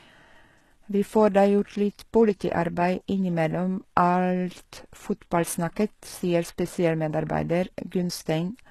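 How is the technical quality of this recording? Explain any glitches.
The speech carries plainly audible codec damage from start to finish. Throughout, HE-AAC compression is the likely cause: its treble is synthesised from copied lower bands, so sibilants turn gritty and metallic. Unlike a plain low-pass, the top stays bright up to a cut-off at 12.3 kHz, which fits a bitrate around 16 kbps.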